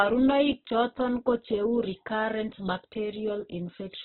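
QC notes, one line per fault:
throughout: Opus compression, heavy, likely at a very low bitrate; speech sounds rough and grainy, spectrogram shows nothing above about 4.1 kHz with noise-filled bands.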